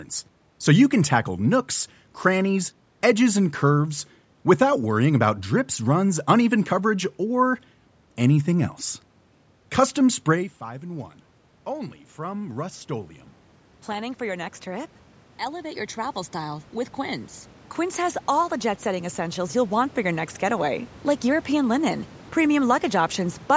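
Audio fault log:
10.33–13.18 s and 13.86–20.88 s, automatic gain rising: after the talker moves back from the microphone around 10.5 s and the input drops by about 17 dB, the automatic gain control slowly lifts its gain, by about 4 dB and then by about 10 dB, so voice and room noise swell together. On the waveform the envelope and noise floor climb gradually, and the spectrogram brightens evenly across all bands up to the 8 kHz ceiling.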